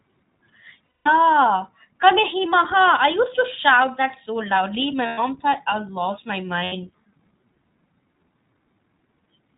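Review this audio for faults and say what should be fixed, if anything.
iLBC codec, throughout the clip: the whole recording has passed through the iLBC narrowband VoIP codec, and the damage is plainly audible. Nothing above 4 kHz survives, so the speech sounds boxed-in, slightly rough and synthetic. Each short frame's excitation is coded independently, trading some smoothness for robustness, and the quality points to the 15.2 kbps mode with 20 ms frames. To prevent this, capture or transmit with a wideband or fullband codec such as Opus at a generous bitrate.

Lost iLBC frames, at 0.86–1.08 s (about 200 ms), 5.06–5.20 s (about 120 ms) and 6.64–6.74 s (about 80 ms): packets went missing and the decoder filled each gap by repeating the last pitch cycle blended with noise, so the speech turns into a held, faintly buzzy vowel. The longest gap fades as the concealment runs on. Because iLBC frames stand alone, normal speech returns almost immediately after each gap. 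To prevent this, use a network path with less packet loss, a larger jitter buffer, or forward error correction.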